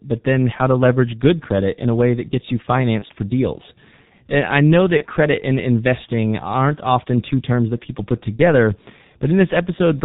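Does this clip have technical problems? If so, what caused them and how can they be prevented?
Yes. The whole recording carries heavy G.723.1 codec damage: at about 6.3 kbit/s the speech loses everything above 4 kHz and its slowly updated vocal model blurs consonants, leaving a muffled, hoarse sound. Prevent it by using a wideband, higher-bitrate codec such as Opus.

VoIP packet loss concealed by the speech codec appears at 2.99–3.06 s (between "way that gets you" and "for deals"), 4.97–5.04 s (between "I know" and "credit and investing aren't"), and 8.36–8.41 s (after "terms that people put"). Each gap fits a single 30 ms lost frame. The decoder filled it by repeating the previous pitch and filter at falling gain, giving a short buzzy or noisy smear whose weakness carries briefly into the recovered speech. Prevent it with a jitter buffer, forward error correction, or a network path with less loss.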